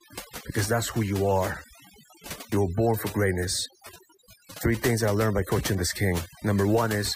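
Overdone noise removal runs through the whole of this speech clip. A noise reduction stage was pushed too hard on a noisy recording, so any frequency band sitting near its noise estimate gets pulled far down or shut off entirely, and the softer parts of the voice are caught with it. Between phrases the background drops to near silence scattered with twinkling specks.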